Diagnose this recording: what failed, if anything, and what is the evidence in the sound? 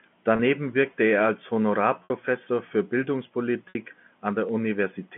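Network stage: packet loss with pitch repetition. The gaps at 0.36 s (30 ms, just before "wirkte er als"), 2.04 s and 3.69 s (60 ms each) are bridged by a repeated pitch period.

Converter stage: a DC step. Low thumps at 2.74 s and 4.49 s mark the zero line jumping. Each offset then decays, as if through a 2 Hz high-pass.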